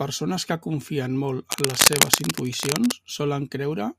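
Cable scratch noise from 1.50 to 2.92 s: dense, uneven scratching bursts slightly louder than the speech, likely a worn connector shifting its contact.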